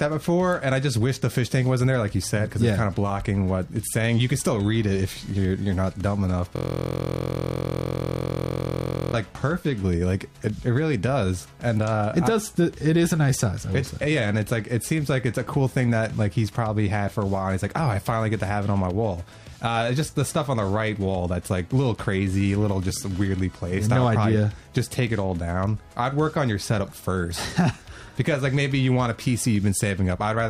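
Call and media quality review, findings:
System hang loop, 6.56–9.14 s: steady buzz at 43.1 Hz replacing the audio. Driver/host froze; output hardware kept replaying one 23.22 ms ring-buffer segment, consistent with a 1024-sample buffer. Waveform: identical repeating blocks. Spectrogram: harmonic comb spaced 43.1 Hz, flat horizontal bands throughout.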